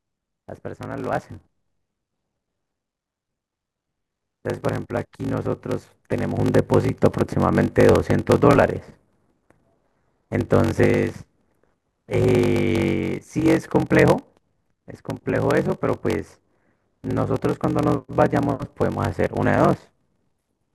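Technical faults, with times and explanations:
Throughout, block size mismatch (padded). The speech carries a steady buzz at 46.9 Hz, which fits a 1024-sample reading block. Each block arrives short and ends in zero-filled silence. The gaps stretch the speech to 0.861 times normal speed, with timbre unchanged.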